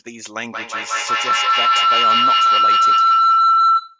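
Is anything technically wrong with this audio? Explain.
Yes. From 0.53 s to the end, a feedback howl: a microphone-to-loudspeaker loop gains level each pass, building a tone around 1.5 kHz, pulsing about every 200 ms, peaking about 14 dB above the speech.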